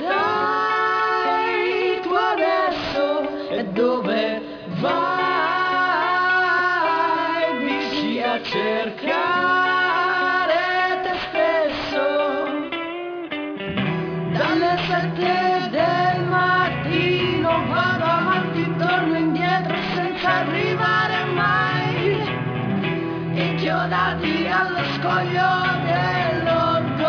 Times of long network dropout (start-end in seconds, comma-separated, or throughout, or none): none